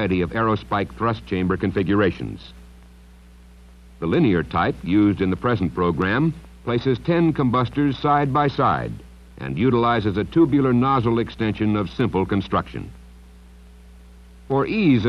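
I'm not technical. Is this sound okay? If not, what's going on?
Yes, nothing wrong here.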